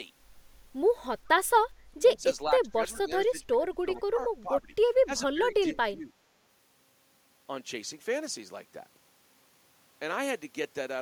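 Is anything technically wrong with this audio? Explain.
Yes. Speech suppressed in double talk occurs three times: 1.87 to 2.25 s, 2.45 to 4.73 s, and 5.05 to 6.16 s. This is likely an echo canceller that could not tell the near talker from returning loudspeaker echo while both sides spoke, so it attenuated everything. The speech dips sharply, by about 25 dB at its deepest in the first stretch and about 15 dB in the later two, with portions fading or breaking up for roughly a second and a half across the longest span.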